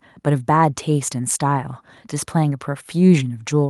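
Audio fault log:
Nothing stood out on listening to this speech recording.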